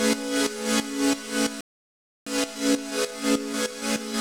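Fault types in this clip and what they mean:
Playback stall: The player likely ran short of buffered data or had its output thread blocked, so nothing reached the output for a while. The sound cuts off mid-flow at 1.61 s and stays silent for about 0.66 s before resuming at 2.27 s.
Time-compressed catch-up: To clear the backlog built up during the stall, the player drops small slices of audio and cross-fades across the joins. From 2.27 s to the end the sound runs 1.1 times fast, hurried but at normal pitch.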